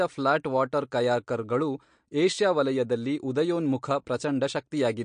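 MP3 compression runs throughout: nothing reaches above 9.8 kHz, and the speech carries a plainly audible watery swirl. The likely cause is an encoder short of bits, cutting the treble and switching weak frequency lines on and off between frames, which fits a rate near 48 kbps.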